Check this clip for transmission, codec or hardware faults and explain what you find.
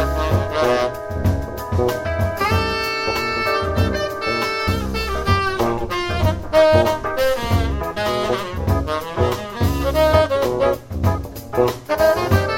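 The clip has one codec fault. Compressed frames are skipped at 4.67 s and 7.96 s, jumping roughly 70 ms (about three 26.1 ms frames), and at 10.13 s, jumping about 150 ms. The decoder never plays those frames, so the audio leaps forward. Overlapping neighbours smear each join into a soft blip, not a hard click or silent gap.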